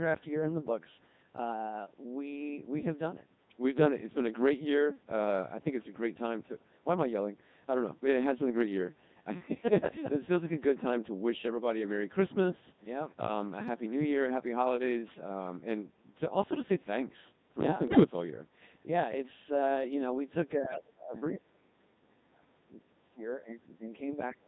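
Throughout, the speech has the robotic, buzzy character of the Codec 2 vocoder, heavily degraded and consistent with its 2.4 kbit/s mode. Only pitch, voicing, energy and a coarse spectral envelope survive, and the decoder rebuilds the voice from sine waves, so the natural waveform is lost.

From 17.88 to 18.04 s, bit errors on digital voice radio hit a handful of frames at a bit error rate of several percent. Each corrupted frame carries wrong pitch, level, voicing or spectral parameters, so the synthetic voice briefly jumps and warbles into garbled bleeps.

From 21.16 to 21.41 s, a faint second voice well below the main speech comes through. This is likely the other side's voice leaking through, with loudspeaker echo not fully cancelled at the microphone. Overlapping this, from 21.33 to 22.09 s the main speech dips sharply, by a drop of around 40 dB at its deepest, consistent with speech suppressed in double talk, where the canceller attenuated both voices during overlap.

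The same suppression returns from 22.26 to 23.96 s, pulling the speech down for well over a second with drops of around 35 dB. Within it, from 23.29 to 23.37 s, a very faint scrap of the leaking far-end voice is audible. A final, shallower dip of around 20 dB runs from 24.31 s to the end.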